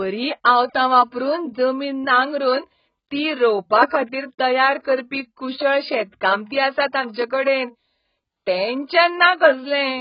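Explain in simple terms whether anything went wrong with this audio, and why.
AAC compression damage runs through the whole clip, from start to finish. The speech sounds dull and smeared, because nothing above about 5.1 kHz survives, so the crisp top end of consonants like s and t is gone. The likely cause is an AAC encoder squeezing the file hard: to save space, it throws away the high frequencies and blurs the detail that is left, giving the speech a fizzy, warbly texture.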